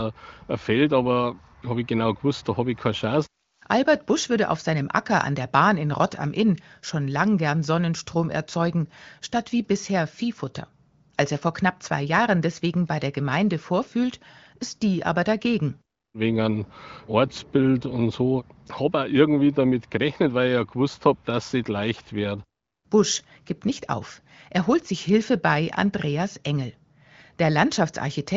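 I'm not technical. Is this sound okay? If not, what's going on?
Yes, nothing stood out as wrong when listening to this recording.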